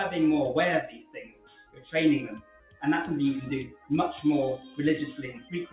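A noise suppressor applied to music or sounds runs through the whole clip. A speech-oriented suppressor treats sustained tones, ambience and reverberant tails as noise, so the level swings by roughly 15 dB as it clamps down between attacks. The result is pumping and a thinned-out sound. Sound cut by the noise suppressor is clearest at 0.87 to 1.94 s, dropping by about 15 dB for roughly a second. Shorter dips follow at 2.34 to 2.82 s (about 13 dB), 3.68 to 3.9 s (about 12 dB), 4.61 to 4.78 s (about 6 dB) and 5.36 to 5.52 s (about 9 dB). In each, held or decaying material sinks or has its tail cut short while sharper onsets survive. The audio also carries nothing above 4 kHz, which fits a narrowband telephone-style call codec.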